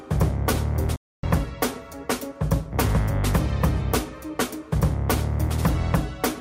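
Right around 0.96 s the sound just drops out, and nothing comes through until about 1.23 s, so you get a dead gap of roughly 270 ms in the middle of the flow. That's a playback stall: the output goes fully silent rather than fading or glitching. The likely culprit is the player running dry on data or its thread getting blocked, leaving it nothing to send out until it caught up.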